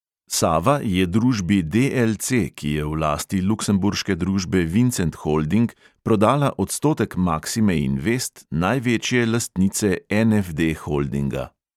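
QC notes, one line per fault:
No technical faults can be heard in the signal at any point.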